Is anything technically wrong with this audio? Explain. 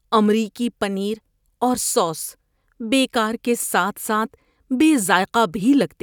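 No, nothing technically wrong can be heard here.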